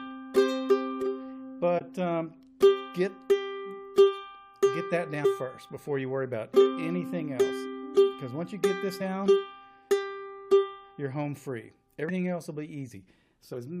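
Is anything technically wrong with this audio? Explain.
Yes, there are two kinds of decoding fault.

Corrupt frame decoded: at 1.78 to 1.82 s, about two damaged compressed frames were decoded despite flipped bits. Misread gains and codes put energy at the wrong frequencies, heard as a short chirp, squeak, blip or burst of noise peaking around -20 dBFS.

Compressed frames skipped: at 5.24 s, 9.00 s, 12.09 to 12.16 s and 13.53 to 13.56 s, whole frames were dropped and the audio jumps ahead by roughly 100, 50, 70 and 100 ms. Each join is heard as a brief blip or click.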